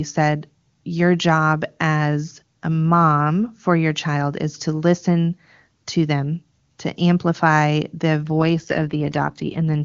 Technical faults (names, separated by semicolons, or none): AMR rate drop